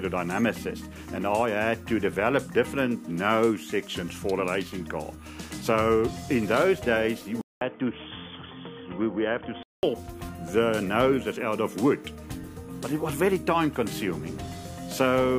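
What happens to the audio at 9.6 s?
At 9.6 s the sound is inside a stretch from 7.41 to 9.83 s that is likely an input switched to a poorer device. It follows a 0.2 s gap, loses everything above 3.5 kHz, drops about 5 dB, and gains a new, faint noise floor. That gap and the new background set it apart from plain filtering.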